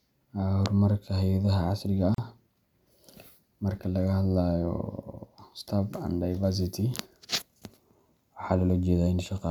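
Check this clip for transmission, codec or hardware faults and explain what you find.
There is one fault, a gap at a join of encoded pieces. From 2.15 to 2.18 s the speech drops out for about 37 ms. The audio was encoded in separate pieces and then joined without trimming. Each encoding run leaves a short lead-in of silence and pads its final frame, and that padding survives at the seam. The result is a brief hole with blurred edges. The speech then resumes exactly where it broke off.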